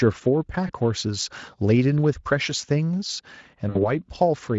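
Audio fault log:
0.67–0.73 s and 3.69–3.90 s: VoIP packet loss concealed by the speech codec. The first gap fits a single lost 20 ms frame, and the second fits about three in a row. With no data arriving, the Speex decoder repeats its last pitch and spectral envelope while turning the gain down frame by frame. The speech smears into a short buzzy tone or coloured noise that fades. Each decoded frame depends on the one before, so the sound stays thin for a moment after packets resume. The Speex coding itself adds only light damage.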